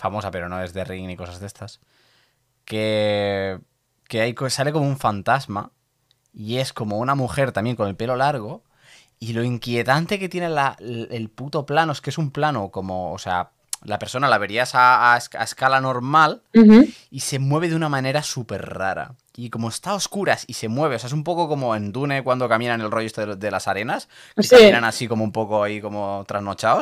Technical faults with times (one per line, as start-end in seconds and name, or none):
14.79-15.14 hard clipping
15.66 hard clipping
16.19-16.81 hard clipping
24.53-24.77 hard clipping